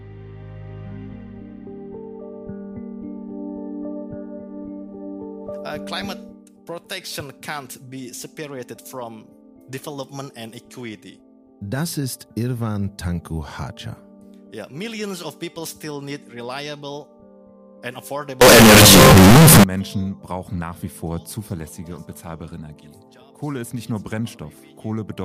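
From 18.41 to 19.64 s the sound turns into a loud, harsh, near-square wave at an almost fixed, high level, with background noise as loud as everything else. This is float read as integer, likely 32-bit float samples read as 32-bit integers. Unlike clipping, quiet passages are pushed just as loud, yet pitch stays traceable.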